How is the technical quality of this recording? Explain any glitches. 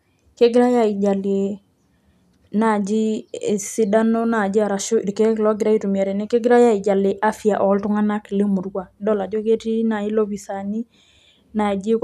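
The technical quality of the recording is sound, with no glitches to explain.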